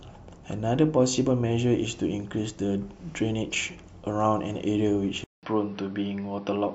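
At 5.24 s the sound drops out for about 0.19 s. When it returns, it runs to the end at 6.74 s with a duller, boxier tone. Nothing is left above 5.8 kHz, so the top of the speech band is gone. A new background noise sits roughly 35 dB below the speech. The loudness stays about the same. This is likely an input switched to a poorer device, a device with a narrower band and its own noise.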